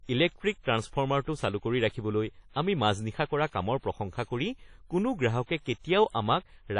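Speech with plainly audible WMA compression damage throughout: a ringing, washy texture with hiss that swells and fades with the signal, and nothing above 10.1 kHz. The likely cause is a low-bitrate WMA encode, which fits roughly 32 kbps.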